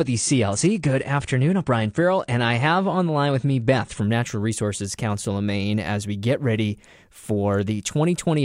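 From 0 to 4.0 s the speech is dull and smeared, with nothing above 9.8 kHz, then abruptly brightens: an adaptive stream starting at a low bitrate.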